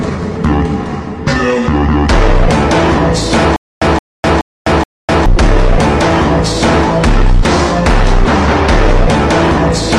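From 3.56 to 5.26 s there is a stutter with silent gaps, most likely caused by the player or stream stalling and, at each retry, replaying its last fragment before running dry. The result is a 170 ms burst of sound repeated four times at an even 424 ms pace, each burst followed by about 254 ms of dead digital silence. The audio that belonged in that stretch never plays.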